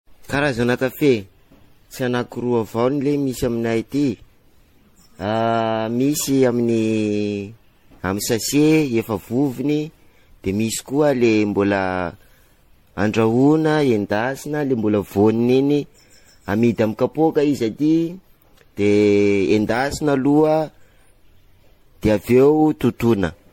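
Speech with generation loss throughout: the audio swirls and sounds hollow, consonant attacks are smeared, and the texture is far rougher than a single encode would leave. This points to repeated lossy coding, likely around ten passes through an MP3 chain that fits about 64 kbit/s. A spectrogram would show nothing above 16.6 kHz, plus flickering holes and blotchy noise between harmonics. On a waveform, transients look softened.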